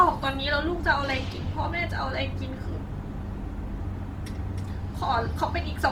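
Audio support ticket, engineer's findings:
Whole clip: speech rough and grainy throughout, fine detail turned noisy rather than swirly, bandwidth still full up to 20.2 kHz. Likely Opus compression in CELT mode, bit-starved bands filled with noise. Damage plainly audible, fits around 24 kbps.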